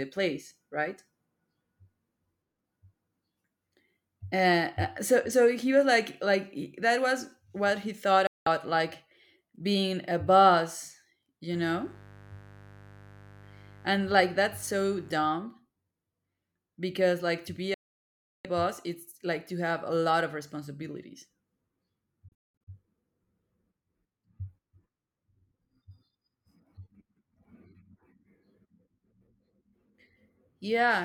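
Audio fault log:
8.27 to 22.67 s, digital broadcast dropout: the sound snaps to silence within a few milliseconds three times, for 0.2 s at 8.27 s, 0.7 s at 17.74 s, and as scattered short holes between 22.28 and 22.67 s. The receiver muted on corrupted or missing frames, and that audio is lost.
11.53 to 15.13 s, mains buzz: a steady, raspy buzz sits under the speech, well below it. Sharp switching spikes at twice the 50 Hz mains rate leaked in, and their dense harmonics give the buzz its edge.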